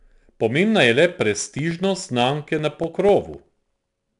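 Right from the start the whole clip carries 4-bit ADPCM compression, and the damage is plainly audible. Each sample is coded as a coarse 4-bit step from a predicted value, so the error rides along as a gritty hiss that swells with the speech. The top end stops dead at 10.6 kHz, which points to a sample rate around 22 kHz and a bitrate near 89 kbps, and that's why everything sounds a bit dull.

Then, just after "je le" at 1.21 s and running to 4.09 s, you get periodic USB or driver dropouts. Something is blocking the audio path on a fixed schedule, every 0.125 s, and each time roughly a millisecond of audio goes missing and is replaced by silence. That gives about twenty evenly spaced little ticks, eight a second, and you only really notice them where there's speech to cut into.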